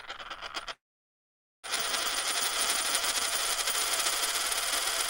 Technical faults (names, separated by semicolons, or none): long network dropout